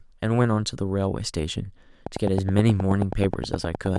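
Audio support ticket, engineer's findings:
Train of clicks, 2.07 s to 3.97 s. Regular ticking at 9.5 clicks per second, about twenty near-identical pulses peaking well above the speech, audible in pauses too. Likely interference from nearby equipment or a faulty connection or power supply injecting periodic pulses.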